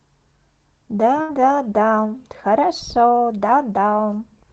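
At 1.21 to 1.31 s, a burst of packet loss: roughly 80 ms of audio is lost, concealed by a 73 ms fading extension of the preceding sound before the speech resumes, skipped forward.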